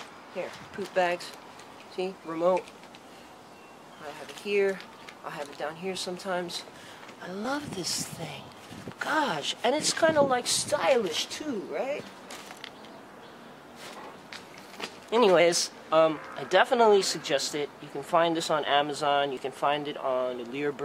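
Audio missing between chunks is heard at 7.45 s and 19.37 s. Each is a brief skip of roughly 30 ms, with the two sides butted together and no gap of silence. The likely cause is a recorder working in 4-second chunks and dropping sound at the handover.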